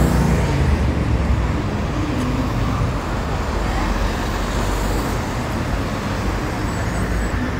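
At 5.14 s a brief glitch cuts through the sound, and a second one follows at 7.31 s. Each lasts only a few milliseconds. Both come from damaged data in a compressed stream: a short stretch of the encoded bytes was corrupted, so the decoder misread the affected frame, briefly produced garbage output, and then had to find the next valid frame header before it could resume clean playback.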